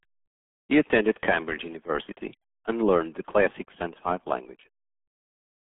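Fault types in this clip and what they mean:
RealAudio 14.4 codec: a low-rate dial-up speech codec, here about 8 kbit/s, leaving muffled, gargly speech; spectrogram shows nothing above 3.8 kHz, energy confined roughly 150 Hz to 3.5 kHz.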